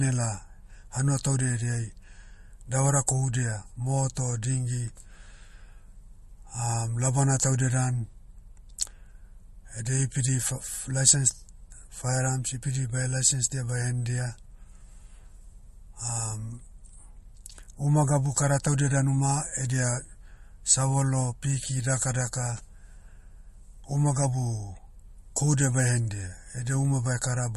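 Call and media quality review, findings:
Watery, swirly texture on the speech throughout, plainly audible, with smeared consonant attacks and nothing above 12.1 kHz. Likely MP3 compression at a low rate, fitting roughly 40 kbps: treble cut at a fixed frequency, weak frequency lines switching on and off between frames.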